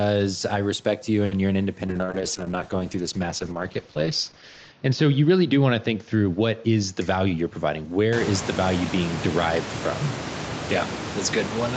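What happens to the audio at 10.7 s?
At 10.7 s the speech is still inside a call bitrate drop that began at 1.88 s and lasts to the end of the clip. The encoder's budget fell from 32 to 8 kbps, so Opus codes the speech much more coarsely, giving a rough, watery, muffled sound. Unlike packet loss, there are no gaps or repeated fragments, only a continuous loss of detail. The rise in room noise around 8 s is separate.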